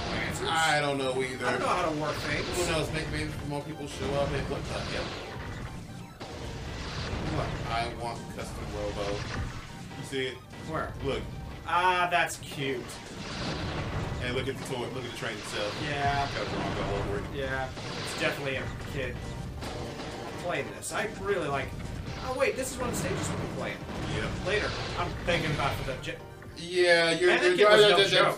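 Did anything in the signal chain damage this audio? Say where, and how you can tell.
No, nothing in the signal chain stood out as a problem on listening.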